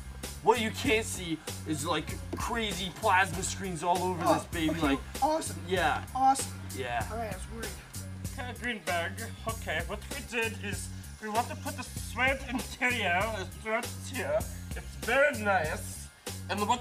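No technical faults can be heard anywhere in the signal.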